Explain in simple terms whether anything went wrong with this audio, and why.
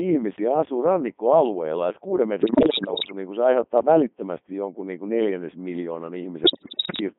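Yes. The whole recording has passed through the Codec 2 vocoder, a very low-rate digital-radio codec that rebuilds the speech from a few settings rather than keeping the real waveform. That is why everything sounds robotic and buzzy and thin, not just muffled.

On top of that there are bit errors on digital voice radio, from 2.40 to 3.12 s (after "asuu rannikkoalueella että kuuden", before "niin kuin se aiheuttaa") and from 6.44 to 7.00 s (after "niin kuin neljännes miljoonan"). Unlike dropouts, the sound doesn't go silent. It lurches in pitch and loudness into bleeps and warbles, and the second burst is much worse.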